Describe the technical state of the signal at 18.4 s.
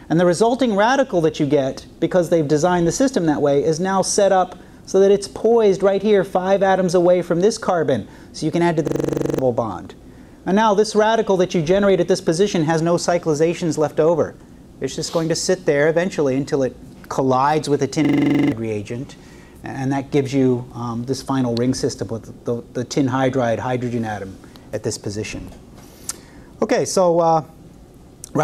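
At 18.4 s the signal is inside a system hang loop running from 18.05 to 18.52 s. The playback froze while the hardware kept replaying one 42.67 ms slice of its ring buffer, which fits a 2048-sample buffer, eleven times over. It sounds like a rapid stutter-buzz at 23.4 Hz, and roughly half a second of real audio is lost. The waveform shows identical repeating blocks, and the spectrogram shows evenly spaced vertical stripes with a comb of harmonics every 23.4 Hz.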